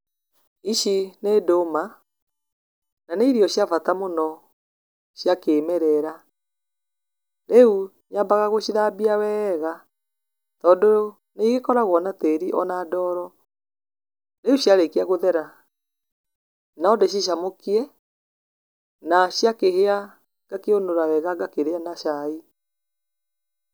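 No technical faults are audible.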